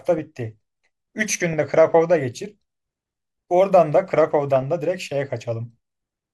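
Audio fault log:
1.37–1.54 s and 4.53–4.63 s, DAB burbling: errors at around 0.3 % get past the error correction, so wrong samples put short blips of noise in single sub-bands over the speech.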